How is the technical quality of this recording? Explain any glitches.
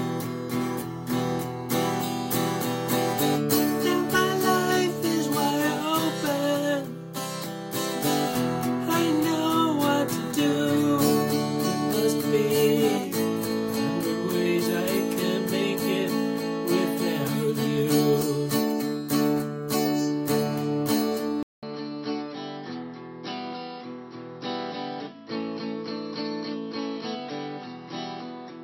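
The recording has one fault. At 21.43 s there is about 200 ms of silence. From then to the end, the sound is duller, drops by roughly 10 dB, and has a new noise floor about 35 dB below the signal. Nothing is heard above 5.7 kHz. This likely means the input switched to a poorer device with a narrower band.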